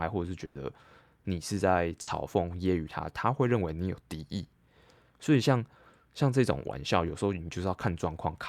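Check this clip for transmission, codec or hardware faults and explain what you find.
Two bursts of packet loss interrupt this speech clip, at 0.45 to 0.57 s and at 2.01 to 2.09 s. In each, the sound briefly freezes into a held buzz or thinning hiss that fades, then jumps ahead. About 100 ms of speech is missing in the first and about 60 ms in the second. Consecutive packets never arrived in time, so the receiver stretched the last sound and lowered it before resuming.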